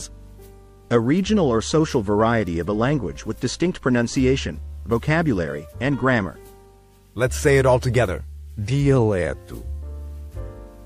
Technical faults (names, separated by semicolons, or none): bit error spike